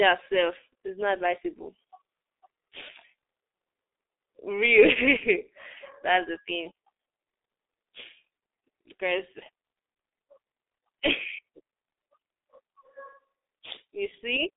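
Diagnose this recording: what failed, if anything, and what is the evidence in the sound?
The failure is at the codec stage: heavy G.723.1 codec damage across the whole speech clip. The audio is band-limited to a telephone line, roughly 300 Hz to 3.7 kHz, with nothing above 3.8 kHz. It sounds muffled and hoarse, with smeared consonants, which fits a low bitrate near 6.3 kbit/s and a coarse 30 ms frame model.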